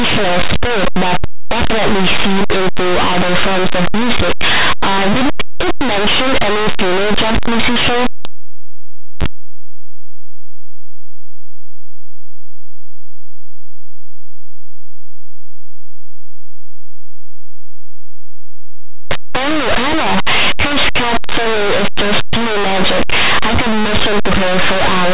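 Speech that sounds harsh and very loud throughout, which fits linear audio read as companded: plain 8-bit linear samples decoded as mu-law codes, so values just on one side of zero expand into loud, distorted peaks while those on the other side stay small.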